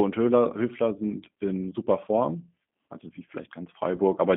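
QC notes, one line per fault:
throughout: G.729 codec at 8 kbit/s; the line band sits between 150 Hz and 3.5 kHz, with a plainly rough, synthetic pulse-built texture that separates it from simple band-limiting.
3.96–4.01 s: VoIP packet loss concealed by the speech codec; a 20 ms gap, consistent with one lost packet, is filled with a fading buzzy or noisy extrapolation rather than silence, and the sound stays weak briefly afterwards.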